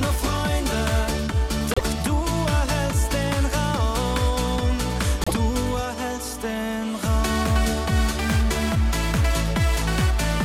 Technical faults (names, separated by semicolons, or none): broken MP3 bit reservoir